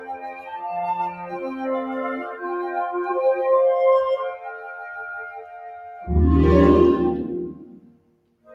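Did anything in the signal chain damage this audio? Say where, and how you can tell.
Yes. The damage happens in call processing: a noise suppressor applied to music or sounds was left switched on. Throughout the clip the level swings by roughly 15 dB as the suppressor keeps deciding what counts as noise. Onsets get through, but sustained tones and tails are pulled down, so the sound pumps. On a waveform the envelope jumps at each attack and then collapses too early. A spectrogram shows harmonics and ambience fading in patches between transients.

Sound cut by the noise suppressor is clearest at 0.0–0.51 s, with a drop of about 9 dB, and at 4.3–6.09 s and 7.85–8.47 s, each dropping about 12 dB. The middle span is the longest, close to two seconds. In these stretches the suppressor treated held material as noise and applied extra gain reduction. On the waveform the envelope narrows sharply, and on the spectrogram energy darkens across the band, with decays cut off instead of fading away naturally.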